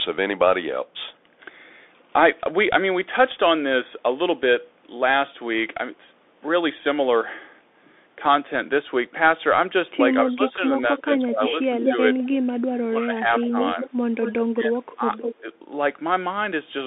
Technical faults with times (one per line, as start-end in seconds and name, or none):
0.00-16.86 Bluetooth CVSD headset codec
10.13-12.28 echo leak
10.24-12.16 speech suppressed in double talk
12.86-15.46 speech suppressed in double talk
13.40-14.42 echo leak
15.22-15.35 echo leak